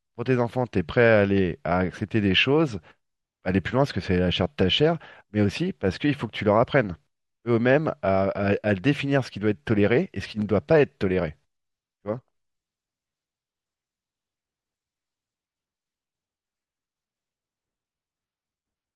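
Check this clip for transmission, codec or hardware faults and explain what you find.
No transmission, codec or hardware faults are audible in the speech, and the signal holds steady throughout without any dropout, distortion or interruption.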